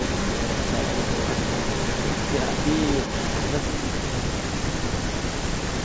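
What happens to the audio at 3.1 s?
At 3.1 s the speech is still carrying an echo leak, which runs from the start of the clip to 3.53 s. A second copy of the speech arrives about 0.47 s behind the original and only slightly quieter, so it overlaps the following syllables. The likely cause is a far end playing the call on a loudspeaker while its echo canceller let part of that pickup return. Unlike room reverberation, which smears sound into a continuous tail, this is a discrete, clearly separated repeat.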